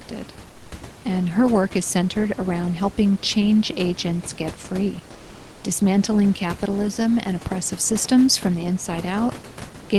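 At 0.51 to 0.71 s, just before "and her", the room background drops out. A flat, featureless hiss, about 4 dB quieter, fills the 200 ms gap. This is comfort noise in place of the background, likely from Opus discontinuous transmission. The sender went silent in the pause, and the receiver synthesised noise instead. At 5.11 to 5.63 s it happens again for 520 ms. This time the level matches, but the real room texture still turns smooth and uniform.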